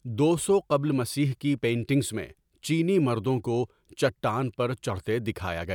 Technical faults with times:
none

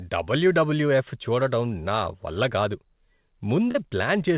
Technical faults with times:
3.71-3.77 short concealed packet loss

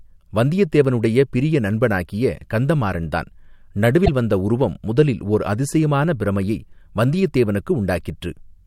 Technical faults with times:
4.02-4.08 damaged data in a compressed stream

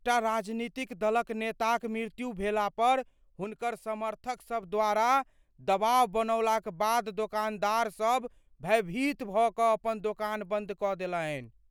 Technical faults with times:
3.44-4.63 sudden gain jump

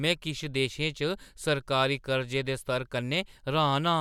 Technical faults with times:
none

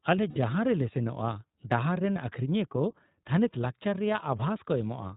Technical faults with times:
0.00-5.17 iLBC codec
0.30-0.38 lost iLBC frames
2.15-2.17 lost iLBC frames

